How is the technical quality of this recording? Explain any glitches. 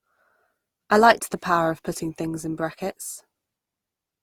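The recording has one audible problem, present from start to finish: generation loss. The speech sounds swirly, hollow and smeared, with consonant attacks blurred rather than crisp. This is likely the result of the audio passing through a lossy codec several times, perhaps around four rounds of Opus at a rate near 48 kbit/s. Each pass re-quantises on a shifted frame grid, so the damage compounds. A spectrogram would show coding noise built up across the bands, and the waveform would show softened transient edges.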